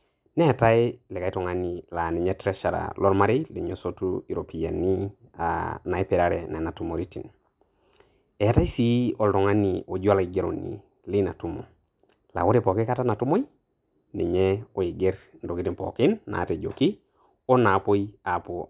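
No technical faults are audible in this speech recording.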